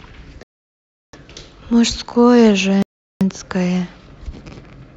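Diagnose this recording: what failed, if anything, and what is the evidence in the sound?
The speech drops to dead silence twice, from 0.43 to 1.17 s (about 0.70 s) and from 2.82 to 3.22 s (about 0.38 s), then resumes. This points to a likely Bluetooth stall at the wireless link: delayed packets emptied the headphones' buffer, pausing playback until retransmissions arrived.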